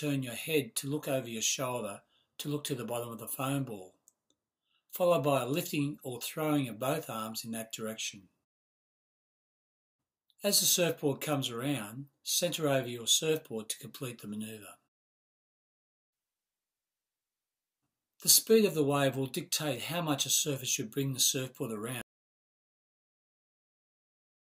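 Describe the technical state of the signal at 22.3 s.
The input was likely lost, leaving an audio dropout to silence from 22.02 s to the end: the sound cuts off and the gap holds no room tone.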